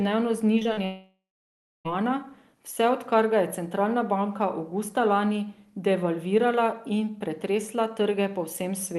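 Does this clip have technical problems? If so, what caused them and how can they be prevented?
Yes. Short concealed packet loss: packets arrived too late at 0.59, 0.63 and 0.73 s. The decoder extended the preceding sound to fill each gap, leaving brief smears of 30 to 60 ms. A larger jitter buffer, in-band forward error correction or a steadier connection would prevent this.

Long network dropout: from 0.85 to 1.87 s, likely a stall in packet delivery, the last sound stretches into a fading buzz or hiss. It then gives way to about 0.62 s of near-silence, and the audio resumes with that second missing. A more reliable network link, such as wired instead of congested Wi-Fi, would prevent this.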